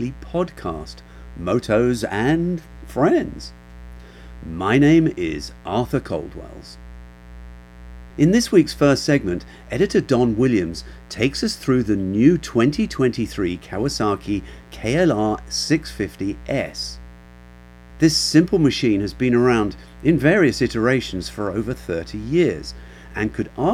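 A mains buzz runs under the speech from start to finish. It sits roughly 25 dB below the speech. The supply here is 60 Hz. Sharp switching spikes, of the kind a dimmer or rectifier produces, enter the signal path twice per cycle. Each spike is rich in harmonics of 60 Hz reaching up into the kilohertz range. The result is a steady, raspy buzz rather than a smooth hum.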